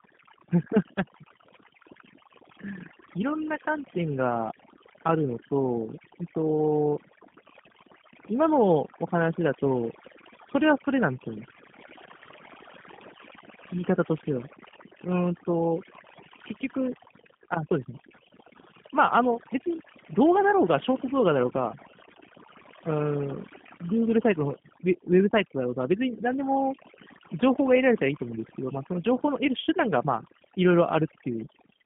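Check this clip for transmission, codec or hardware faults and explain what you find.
Two faults run through the whole speech clip: overdone noise removal and G.729 codec coding, layered over each other.

Overdone noise removal, throughout: a noise reducer set far too aggressively cuts any frequency band near its noise estimate, dragging quiet parts of the voice down with it. The background drops and breaks up into twinkling specks.

G.729 codec, throughout: the speech is rebuilt from a vocal tract filter, a pitch predictor and a few pulses per short frame, which points to a G.729A stream at 8 kbit/s. The band runs from 150 Hz to 3.4 kHz with nothing above 3.5 kHz, and the damage is plainly audible as a rough, synthetic edge.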